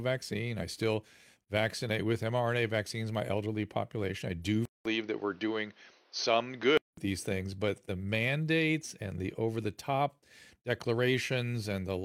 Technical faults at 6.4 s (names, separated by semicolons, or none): input switched to a poorer device